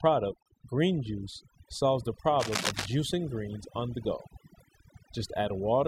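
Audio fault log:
Throughout, overdone noise removal: the noise reduction was pushed too hard, so individual frequency bands near its noise estimate get pulled right down or cut out, taking the quieter parts of the speech along. The background drops and breaks up into little twinkling specks.
0.43 to 0.46 s, gap at a join of encoded pieces: a silence of about 32 ms drops into otherwise continuous speech, edges smeared by the codec, and then the sound picks up right where it left off. That's the encoder's start delay and last-frame padding left untrimmed where two separately encoded pieces meet.
2.39 to 2.86 s, cable scratch noise: for roughly half a second there's dense, uneven scratching and rustling laid over the speech, and it's loud, at something like 5 dB below the speech itself. Likely a worn cable, connector or control being moved, its contact resistance jumping around rapidly.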